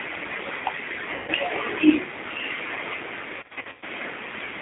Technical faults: G.729 codec; VoIP packet loss concealed by the speech codec

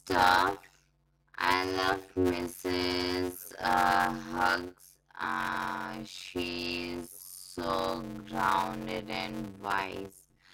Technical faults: block size mismatch (padded)

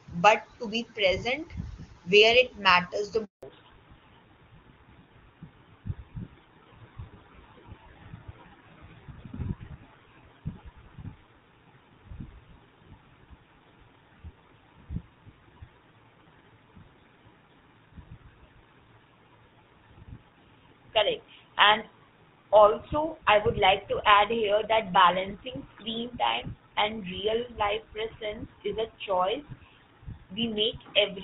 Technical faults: handover gap; fallback to narrowband

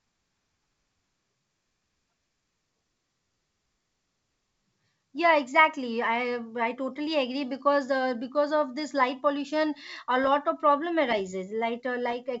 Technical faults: bit errors on an ADPCM link

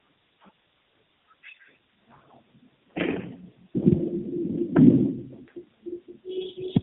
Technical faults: tandem speech coding

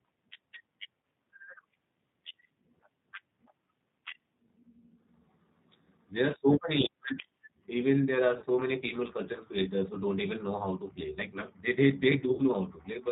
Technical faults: G.729 codec; VoIP packet loss concealed by the speech codec

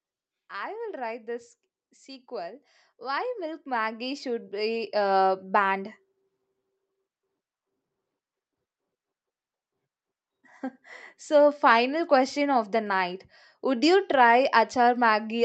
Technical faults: automatic gain rising

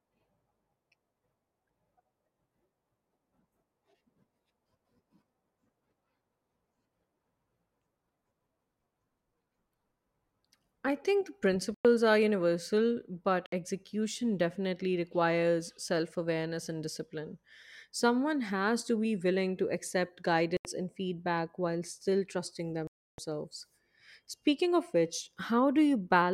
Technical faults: Bluetooth stall

